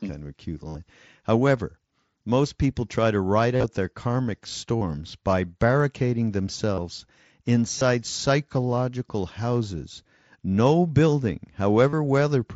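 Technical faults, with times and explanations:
0.68–0.75 s: concealed Bluetooth headset packet loss, about 68 ms of lost packets filled by repeating recent waveform, heard as a held buzzy tone with a warble on recovery.
3.56–3.64 s: concealed Bluetooth headset packet loss, losses scattered over 75 ms with a longest run of 45 ms, giving broken buzzy patches where repeated waveform covers the gaps.
4.77–4.81 s: concealed Bluetooth headset packet loss between "their karmic" and "by barricading", a 45 ms gap bridged by copied waveform, audible as a short buzzy hold.
6.75–6.78 s: concealed Bluetooth headset packet loss just after "by barricading", 30 ms replaced by repeated waveform, a brief tonal smear before normal audio resumes.
7.78–7.81 s: concealed Bluetooth headset packet loss just before "psychological houses", 30 ms of missing packets concealed by waveform repetition, a short buzzy blip.
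11.89–11.93 s: concealed Bluetooth headset packet loss, roughly 38 ms of copied waveform standing in for lost packets, a short buzz with a slight warble as real audio returns.
The link runs through the Bluetooth mSBC headset codec, which limits the speech to 8 kHz with light grain on louder sounds.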